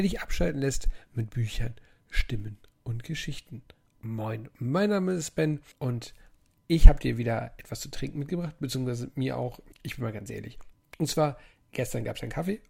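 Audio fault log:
Nothing to log here; I listened all the way and didn't catch a single problem worth a line.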